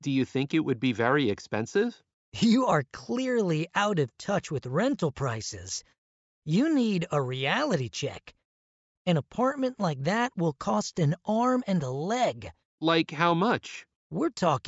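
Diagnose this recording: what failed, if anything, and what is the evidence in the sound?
Nothing in the signal chain audibly fails: no stage, from wiring and conversion through buffering, processing, transmission and storage to playback, leaves any audible mark on this recording.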